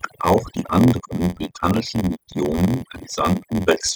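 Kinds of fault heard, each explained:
Overdone noise removal: A noise reducer set far too strong suppresses bands near its noise estimate, leaving a lowered background with twinkling specks throughout.
Block size mismatch (padded): An earlier stage hands over shorter blocks than the next reads, which fits a 512-sample read size, so zero-padding adds an 86.1 Hz buzz and slows speech to 0.938 speed with its timbre intact.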